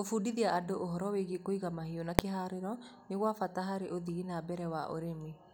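At 2.19 s, invalid numbers at full scale: a calculation produced invalid values pinned at one extreme value, far beyond the speech peaks, for 0.73 ms, heard as one sharp bang.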